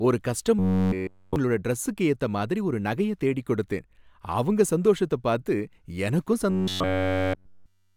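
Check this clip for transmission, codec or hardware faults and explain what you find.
Two stretches of robotic sound from repeated short buffers: 0.59 to 1.36 s, just before "டிரஸ்ஸுக்கு ஏத்தமாதிரி ஒரு நகைய", and 6.50 to 7.96 s, after "அவங்க சந்தோஷத்த பார்த்து எனக்கும்". Throughout both, the speech collapses into a rigid metallic buzz at 93.8 Hz, the rate at which a roughly 10.7 ms chunk repeats. The likely cause is input arriving too slowly, so the playback keeps looping its last buffer while fresh audio is dropped.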